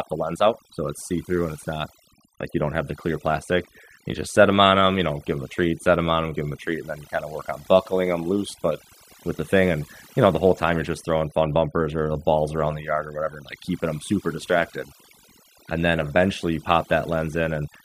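A speech recording suffering from overdone noise removal from start to finish: the background collapses into near silence dotted with twinkling specks. On a spectrogram, the noise floor shows isolated bright dots scattered across empty dark regions, while the quieter edges of the speech are cut into blotchy patches.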